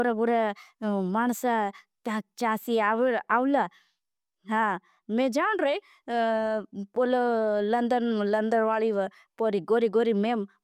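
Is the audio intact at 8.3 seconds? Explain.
Yes, the audio is intact at 8.3 seconds, with no dropout, click, distortion or other fault at that moment.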